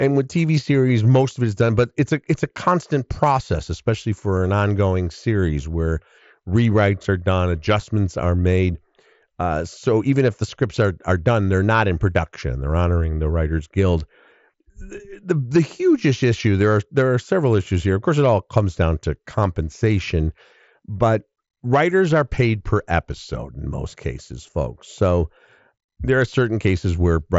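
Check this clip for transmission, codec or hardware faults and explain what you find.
Nothing stood out on listening to this speech clip.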